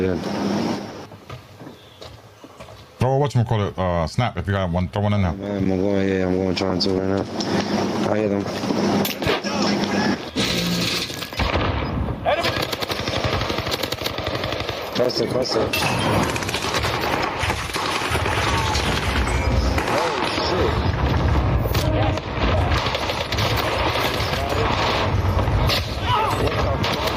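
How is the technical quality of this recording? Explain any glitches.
The recording has one fault, and it runs the whole way through: gain pumping. The level breathes constantly. The swing is large, around 20 dB. The likely cause is input gain set far too high, with a fast limiter or compressor clamping down on every peak. Loud and quiet passages end up squeezed together, and the sound feels flattened and restless.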